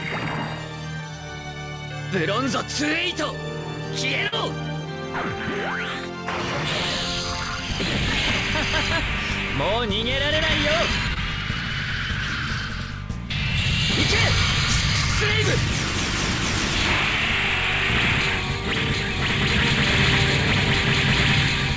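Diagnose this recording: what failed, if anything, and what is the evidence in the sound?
The network stage failed, as short concealed packet loss. At 4.28 to 4.34 s, about 40 ms of audio never arrived, and at 11.14 to 11.18 s about 20 ms more went missing. Each gap is heard as a brief smear or wobble. The receiver's concealment extended the preceding sound across the hole and then blended back into real audio. The call codec's band limit, with nothing above 8 kHz, fits G.722, and is heard throughout.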